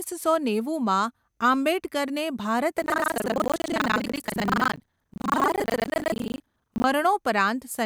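A robotic 25 Hz rattle runs under the speech from 2.76 to 6.88 s: buffer tearing. The writer and reader have slipped, splicing roughly half of each buffer with audio about 100 ms old.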